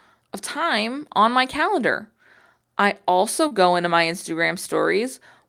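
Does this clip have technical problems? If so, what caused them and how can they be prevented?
Yes. There is one short concealed packet loss at 3.47 to 3.53 s, between "I also" and "into my". About 40 ms of the call's audio failed to reach the decoder in time, and the receiver covered the gap by extending the preceding sound for roughly 33 ms before blending back into the real signal. The result is a brief smeared patch where that moment of speech is synthesised rather than transmitted. Prevent it with a more stable network path and an adequately sized jitter buffer, or with forward error correction.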